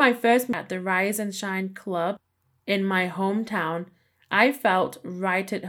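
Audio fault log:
0.53 s, CD skip: the laser jumped to a different turn of the disc's spiral. A tick and a brief mute of a few milliseconds cut the speech, which resumes from another point. On a waveform it appears as a short flat gap followed by a discontinuity, and on a spectrogram as a thin vertical broadband line.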